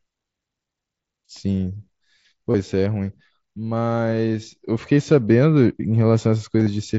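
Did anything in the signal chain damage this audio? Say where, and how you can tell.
Yes, on the Bluetooth link. At 2.51 to 2.54 s and again at 6.59 to 6.67 s the sound turns briefly buzzy and held, then warbles back. That is concealed Bluetooth headset packet loss, with the receiver patching 30 ms, then 45 ms, using repeated stretches of recent waveform.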